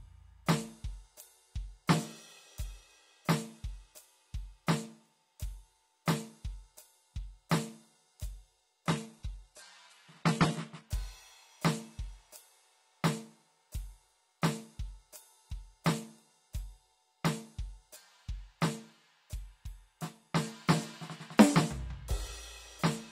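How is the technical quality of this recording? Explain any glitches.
The music has one clear fault, a drop in stream quality lasting two seconds. From 8.86 to 10.86 s, an adaptive stream switches to a lower bitrate, as a streaming player does when the connection slows. Without missing a beat, the sound turns abruptly dull, with nothing above about 11.8 kHz, and the upper range takes on a thin, synthetic sheen. That character points to a low-rate HE-AAC version, around 16 kbit/s. At 10.86 s full quality returns just as suddenly.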